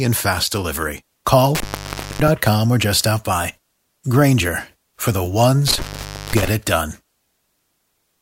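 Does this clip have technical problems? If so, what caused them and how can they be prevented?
Yes. Intermittent contact cuts the speech twice, from 1.55 to 2.28 s and from 5.68 to 6.48 s, with the line open for about 0.56 s and 0.52 s. A loose cable or plug breaks the connection. Unlike a clean digital dropout, crackle marks each edge and faint hiss remains. Reseating or replacing worn cables and connectors prevents it.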